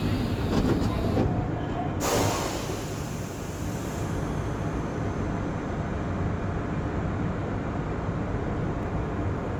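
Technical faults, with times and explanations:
throughout: generation loss. The sound is swirly, smeared and hollow, with blurred attacks, likely from about three lossy re-encodes, fitting Opus near 48 kbit/s, each adding fresh quantisation noise.
8.83 s: dropped buffer (overrun). A small jump in the sound with no gap, likely from samples overwritten before being read, losing a few milliseconds.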